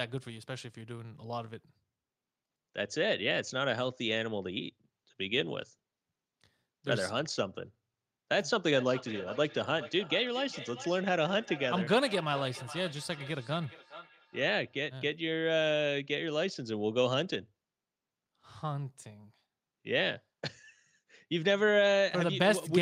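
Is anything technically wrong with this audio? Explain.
Yes. From 8.71 to 14.84 s there is feedback echo between two devices: a second device on the same call replays this microphone's signal, which is picked up again beyond the echo canceller's reach. Each word returns roughly every 0.4 s, thinner and ringing, peaking about 15 dB below the speech.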